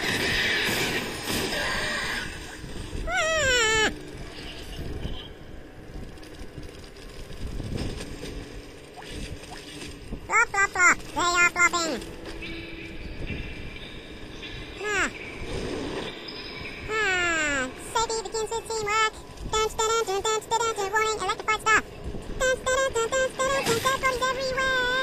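Nothing stood out on listening.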